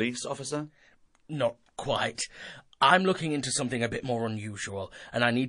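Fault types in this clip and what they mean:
MP3 compression: The speech sounds watery and swirly throughout, with a dulled top end and smeared consonant attacks, most likely from MP3 encoding at a low bitrate, around 40 kbps. Short of bits, the encoder cuts the treble and discards weak frequency detail, which flickers in and out between frames. On a spectrogram this shows as a flat ceiling where the upper band stops abruptly, with patchy, blinking holes below it.
pre-echo: At about 2.15 s, a short hiss rises by about 13 dB and runs for about 32 ms before a sharp onset, so the attack arrives blurred. The codec spread the noise meant for the loud attack across its whole transform block, filling the quiet moment before it. The spread fits a long block of about 52 ms, with no switch to short blocks. On the waveform, a low fuzzy smear leads into the transient. On a spectrogram, a broadband haze appears just before it.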